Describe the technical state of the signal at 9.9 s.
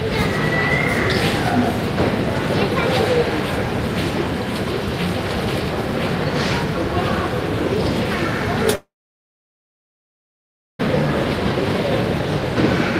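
At 9.9 s the signal sits inside a long network dropout spanning 8.75 to 10.81 s. The likely cause is a stream that stopped delivering audio for about 2 s. The receiver briefly extends the last sound as a fading buzz or hiss, then gives up, leaving roughly 1.9 s of silence, so at 9.9 s nothing is heard. Sound resumes at 10.81 s without the missing stretch.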